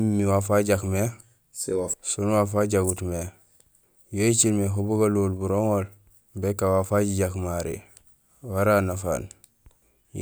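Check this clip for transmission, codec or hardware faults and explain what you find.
Nothing to flag here; I can't hear any fault anywhere in the speech.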